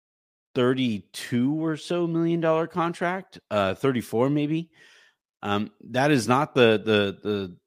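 No technical faults are audible anywhere in the speech recording.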